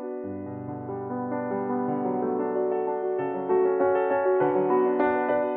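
The music runs without any audible technical fault at any point in the clip.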